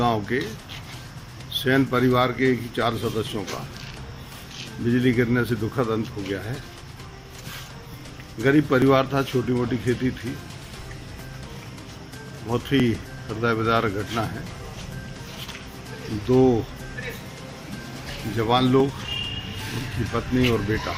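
From 0.84 s to 20.80 s, a tick recurs every 1.99 s: periodic USB or driver dropouts, where a stalled bus or driver skips around 10 ms of audio each time. The strict regular spacing, rather than random clicks, marks it.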